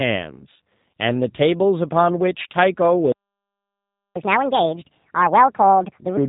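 The speech passes through a G.729 codec for its whole length. Its low-bitrate model rebuilds each short frame from a vocal tract filter, a pitch predictor and a handful of pulses, which points to an 8 kbit/s VoIP stream. Everything above 3.8 kHz is gone, so sibilants lose their edge and the voice sounds boxed in. The codec damage is plainly audible as a rough, slightly synthetic quality.

At 3.12 s the playback stalls. The player most likely ran dry of buffered data, or its playback thread was held up, and it had nothing to send to the output. The sound cuts off mid-flow and stays silent for about 1.04 s, until 4.16 s, which is long enough to register as a hard dropout rather than a brief glitch.

From 4.16 s to 6.17 s the player catches up at higher speed. It resamples its accumulated backlog to run 1.5 times faster, recovering nearly all of the time lost in the stall. Because resampling moves pitch along with tempo, the voice jumps up by roughly seven semitones and sounds hurried and chipmunk-like. 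At 6.17 s the speed and pitch fall back to normal.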